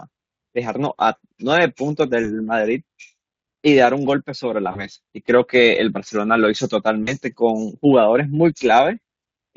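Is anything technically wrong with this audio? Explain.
Yes. Packets dropped on the VoIP link at 2.23–2.28, 4.71–4.86, 7.03–7.12 and 9.23–9.25 s, and Speex's packet loss concealment filled each 20 or 40 ms gap by extending the last pitch and filter at falling gain. The speech briefly smears into a fading buzz or coloured noise, with weak, distorted sound lingering afterward.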